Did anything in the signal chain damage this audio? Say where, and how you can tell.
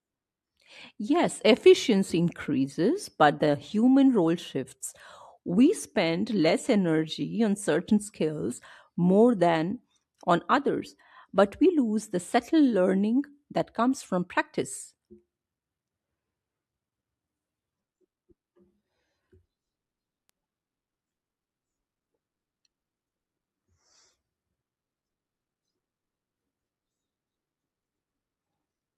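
Yes. A bit error spike, a single flipped bit in memory or on a digital link, corrupted one sample at 11.53 s and another at 20.29 s. Each value jumps by a power of two and snaps back, giving an isolated broadband tick, about -21 dBFS and about -33 dBFS respectively.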